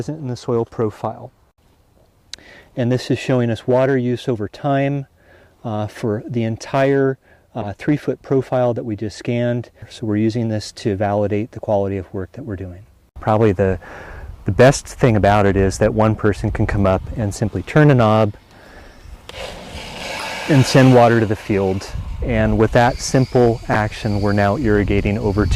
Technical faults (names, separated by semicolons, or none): corrupt frame decoded